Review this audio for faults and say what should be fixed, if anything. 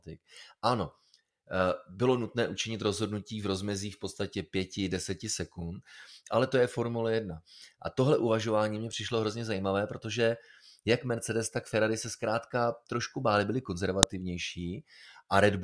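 At 14.03 s there is a sharp, loud click in the speech: a file header played as audio. A new WAV segment was joined without stripping its header, so those header bytes were decoded as samples. Prevent it by parsing and removing headers before concatenating or streaming segments.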